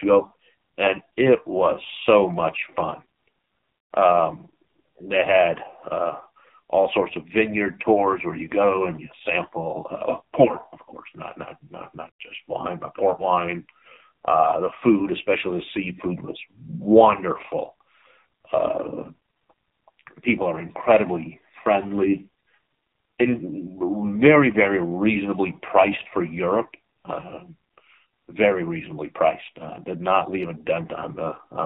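AMR narrowband mobile codec damage runs through the whole speech clip. The sound has been squeezed through the 2G/3G mobile speech path, which samples at 8 kHz, so nothing above 4 kHz survives and the voice sounds boxed-in and dull. Each 20 ms frame is rebuilt from a vocal-tract model driven by sparse pulses, and the damage here is heavy: speech comes out buzzy and synthetic, which fits one of the low modes, around 5.9 kbps.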